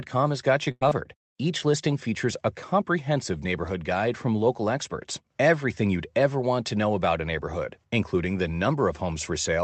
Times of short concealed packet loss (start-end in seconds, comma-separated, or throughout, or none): 0.89-0.93